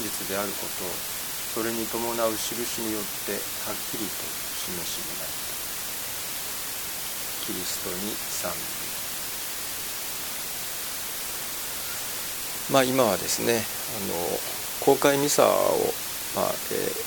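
A constant, even hiss runs through the whole clip, nearly as loud as the sound itself, with no distortion. It points to low bit depth with dither, at about 5 bits.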